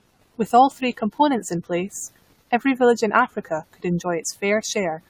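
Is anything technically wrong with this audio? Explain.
Yes. Throughout the speech there is generation loss, likely from repeated lossy AAC encoding, around seven passes at a rate that points to 96 kbit/s. Each re-encode requantises on a shifted frame grid, so noise and spectral holes accumulate, leaving a swirly, hollow, smeared sound with blurred consonant attacks and nothing above 19.9 kHz.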